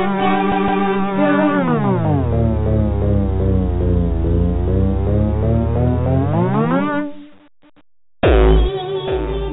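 No technical faults can be heard; the sound carries only what the WebRTC call path leaves behind, with nothing above 4 kHz and the coding grain that points to a narrowband codec such as G.711 A-law.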